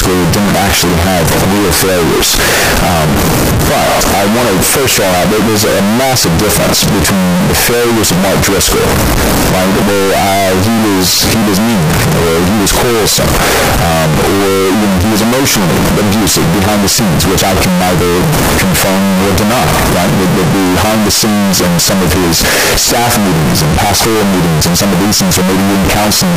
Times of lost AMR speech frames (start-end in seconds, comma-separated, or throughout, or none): none